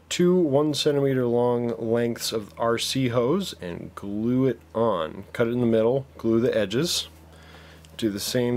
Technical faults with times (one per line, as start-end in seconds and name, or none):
none